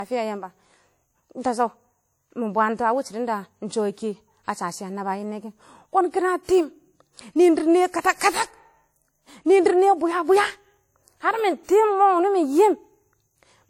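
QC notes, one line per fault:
Throughout: low-bitrate audio saved at a high bitrate. The speech carries the smeared, swirly coding artefacts of a starved encoder, with nothing above 20 kHz, though the file is a large MP3. This likely reflects an earlier encode near 48 kbit/s, which the high-bitrate re-save cannot undo.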